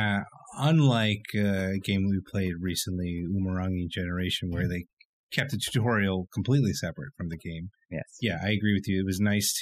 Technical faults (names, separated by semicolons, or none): overdone noise removal